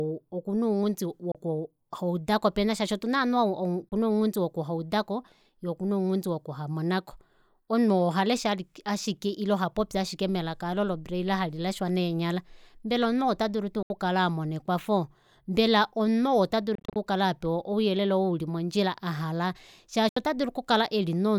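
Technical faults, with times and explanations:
1.32–1.35 s (after "okuna ounghundi"), 3.89–3.92 s (before "vena ounghundi woku haudako"), 13.83–13.90 s (before "amona ekwafo mbela"), 16.75–16.96 s and 20.09–20.17 s, Bluetooth dropout: abrupt silences of 29 to 73 ms, and at 16.75 s about 130 ms of gaps scattered over 0.2 s. These are likely packets that missed their slot on the wireless link. Speech resumes as if it had played on, so content is lost rather than delayed as it would be in a stall.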